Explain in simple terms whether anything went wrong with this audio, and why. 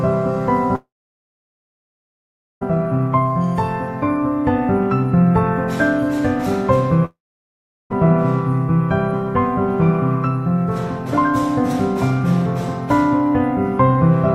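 A long network dropout, twice: from 0.75 to 2.63 s, and again from 7.05 to 8.06 s. In each gap the sound briefly trails off as a fading buzz, then goes silent, for about 1.7 s the first time and 0.75 s the second. When audio returns, it picks up later on, with roughly 1.9 s and 0.9 s simply missing. The likely cause is the connection stalling so no audio reached the player, which filled in briefly, then gave up.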